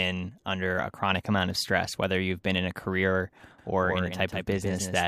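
Speech, with a doubled audio track from 3.58 s to the end. A second, full-band copy trails the original by about 150 ms, roughly 5 dB quieter, with no decay or room colour. It cuts in abruptly, likely from a slower second capture path.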